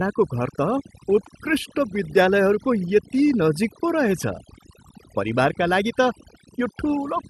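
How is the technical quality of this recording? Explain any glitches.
The recording is marred by heavy-handed noise reduction across its full length; it also passed through a call codec whose band limit of about 12 kHz cuts off the top end, consistent with Opus at a moderate bitrate.

Overdone noise removal runs throughout, from start to end. A suppressor set far too aggressively pushes each frequency band down hard whenever its level sits close to the estimated noise floor, and the softer components of the speech fall below that threshold and get cut along with the noise. The result is a background that drops to near silence sprinkled with twinkling, chirpy specks.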